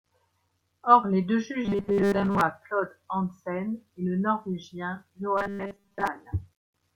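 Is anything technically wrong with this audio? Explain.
Yes. From 1.65 to 2.41 s and again from 5.37 to 6.07 s, the speech turns into a rigid, metallic buzz at 200 Hz that only loosely tracks the talking. This is robotic sound from repeated short buffers, likely caused by audio arriving too seldom so that a 5 ms slice is looped in place of most of the real signal.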